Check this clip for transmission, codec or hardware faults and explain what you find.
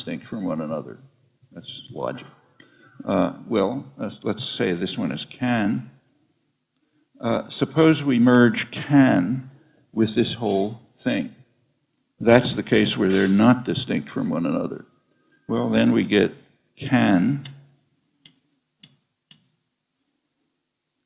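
Nothing audible in the clip points to a transmission, codec or hardware fault.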